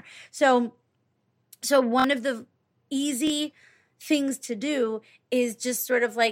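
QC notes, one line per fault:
2.00 to 2.04 s, repeated buffer: a block of about 23 ms plays three times in a row, with a hard join at each restart, producing a short rattling stutter. Fresh audio did not reach the device in time, so it replayed the last block, which fits a 1024-sample buffer. Roughly 50 ms of the speech is lost.
3.27 to 3.30 s, repeated buffer: the same 23 ms block length plays twice, giving a single short stutter and a loss of around 20 ms.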